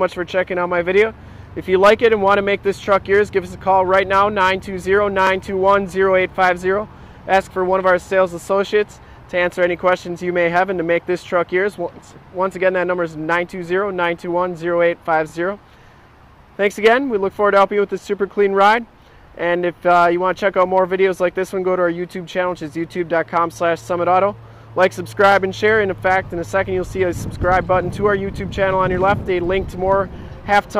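At 5.27, 15.30 and 25.32 s there's a quick stutter, a classic case of overlapping chunks. The audio was handled in 10-second blocks, each starting about 25 ms before the previous one ended, so that sliver plays twice at every join, ticking by regularly.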